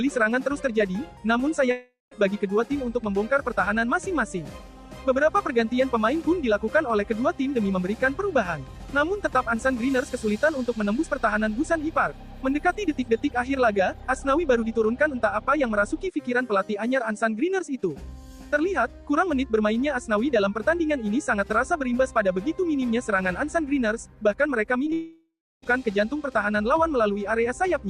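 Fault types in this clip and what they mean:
long network dropout: Audio likely stopped arriving for 0.4 s, later 0.7 s; a fading fill gives way to silence, and sound resumes without the lost part.
short concealed packet loss: Two 20 ms chunks missed the decoder at 24.85 and 24.90 s; the receiver patched each, leaving brief smears just before the longer dropout.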